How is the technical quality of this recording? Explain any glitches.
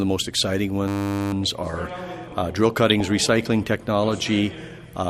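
The recording has three technical problems: plainly audible coding damage throughout, a buzzing freeze near the start, and a brief burst of digital reception errors in the middle.

Throughout, the sound has the dull, gurgling, granular texture of MP2 compression, likely from a low bitrate around 80 kbps. Starved of bits, the encoder shuts off upper sub-bands and coarsely quantises the rest, so the top end flickers in and out and the sound grains.

From 0.88 to 1.33 s there is a system hang loop. The driver stalled while the audio hardware kept replaying one 10 ms slice of its buffer, 45 times over. That exact repetition at 100 Hz is heard as a steady buzz, and the sound then carries on without a gap.

From 2.90 to 3.01 s there is DAB burbling. A low rate of bit errors slipped past error correction into the coded data, corrupting samples across what sounds like about seven frames. Wrong samples put short blips of noise into single sub-bands, giving a short burst of digital noise.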